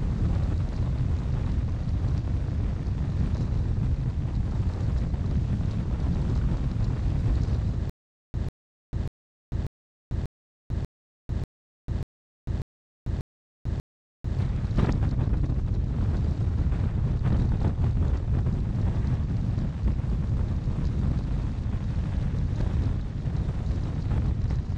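From 7.90 to 14.39 s the audio falls into a stutter with silent gaps: a burst about 146 ms long repeats 11 times, each followed by roughly 445 ms of silence, so a fragment returns every 590 ms at a steady pace. This is likely a player or stream stall that replays its last fragment on each retry, and whatever should have played in that span is lost. A waveform shows identical short blocks separated by flat gaps; a spectrogram shows matching slivers between blank columns.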